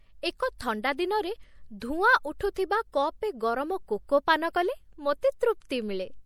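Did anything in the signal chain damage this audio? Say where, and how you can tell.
Yes. The damage is at the codec stage. Throughout, the speech sounds watery and swirly, with chirping s sounds. This is likely MP3 compression, consistent with about 64 kbps.

Pre-echo appears at 2.54 s, also from the codec. A brief hiss, about 17 ms long, precedes an attack. Noise spread across the block fills the quiet before it.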